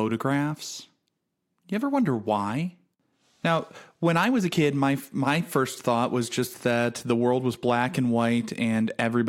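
No technical faults are audible.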